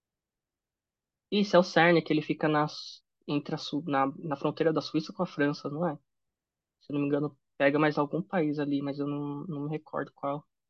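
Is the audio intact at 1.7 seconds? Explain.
Yes, the speech at 1.7 seconds is intact, with no dropout, glitch or other fault audible at that moment.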